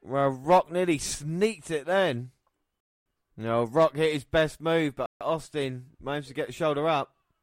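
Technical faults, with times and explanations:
2.80–3.06 s and 5.06–5.21 s, rebuffering stall: the player's downloaded audio ran out, so the speech halts in dead silence for 0.25 s and then 0.15 s before continuing from exactly the same point. Nothing is skipped; time is inserted. The waveform shows flat silent gaps, and the spectrogram shows blank vertical bands with abrupt edges.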